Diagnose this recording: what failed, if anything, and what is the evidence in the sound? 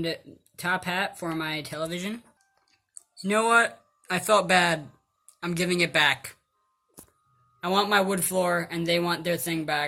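Periodic clock jitter in the converter stage: from 3.61 s to the end, the sound picks up a rough, metallic edge that was absent before, most noticeable on the brighter, higher-frequency content and disappearing whenever the signal drops to silence. The converter's sample clock is being shaken by interference at around 100 Hz, so each component of the signal acquires sidebands spaced about 100 Hz above and below it, producing that grainy texture.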